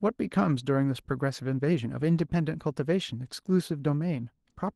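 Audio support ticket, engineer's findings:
Nothing to flag on this one: the speech came through the call path as expected, with the top end stopping around 12 kHz, which fits an Opus call codec running band-limited.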